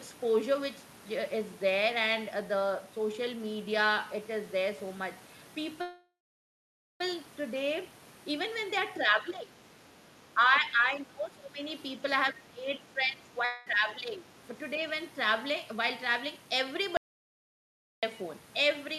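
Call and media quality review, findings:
Call audio freeze, 5.81 to 7.01 s. Last sound smeared into a fading buzz, then dead air for about 0.9 s. Audio picks up exactly where it stopped. Likely packets stalled in transit and the jitter buffer ran dry. Receiver concealed, then waited.
Nothing lost, just about 1.2 s of extra delay stuffed in. Audio after this point arrives later.

Other side's voice leaking through, 8.95 to 9.05 s. Brief scrap of a second voice, about 25 dB under the talker. Likely the far end playing on the talker's loudspeaker, with the echo canceller missing a bit of it.
Short and quiet, just before the double-talk stretch starts.

Speech suppressed in double talk, three stretches: 9.06 to 9.61 s, dip of about 10 dB; 10.34 to 11.61 s and 12.32 to 14.28 s, each dipping about 15 dB. Talker ducks while the other side talks.
Likely the echo canceller couldn't separate near speech from loudspeaker echo during overlap and turned both down. 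Roughly half a second, a second, and two seconds affected.

Jitter buffer speed-up, 12.58 to 13.04 s at 110% speed, then 14.64 to 15.54 s at 104%. Same pitch; the first sounds hurried. About 50 ms trimmed each time.
Buffer was holding more than its target after a late burst, so the receiver cut out short pitch-period slices back to back to pull latency down. The first one is the more noticeable rush.

Long network dropout, 13.45 to 13.67 s. Concealment buzz fills about 0.2 s, no silence, then audio resumes further on with about a quarter second skipped. Likely packets never arrived.
Overall delay drops by roughly 50 ms. Lands inside the third double-talk stretch, so it's tangled with the ducking there.

Audio dropout to silence, 16.97 to 18.03 s. Hard cut to silence for about 1.06 s, no room tone at all, then snaps back mid-flow.
Whatever was said in there is gone. Likely the input went away, via a disconnect, link failure or stray mute, while the encoder kept writing silence. 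Not network concealment: no fade and no buzz.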